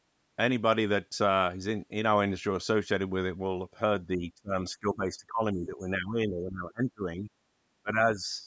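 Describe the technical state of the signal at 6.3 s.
Speech suppressed in double talk covers 6.3 s, inside a stretch from 4.73 to 7.3 s where the voice dips and breaks up in pieces, falling by around 20 dB at its deepest. The likely cause is an echo canceller mistaking overlapping talk for loudspeaker echo and attenuating both.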